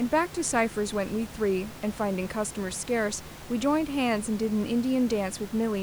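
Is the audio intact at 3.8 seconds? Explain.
Yes, the speech at 3.8 seconds is intact, with only the room's own background noise sitting about 16 dB beneath it.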